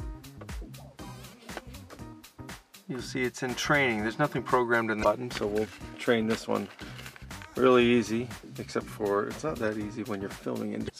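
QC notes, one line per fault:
5.00–5.05 s and 10.86–10.90 s, damaged data in a compressed stream: two brief blips, about 40 to 50 ms each, where corrupted bytes in the compressed stream made the decoder misread those frames, lose sync and hunt for the next valid frame header.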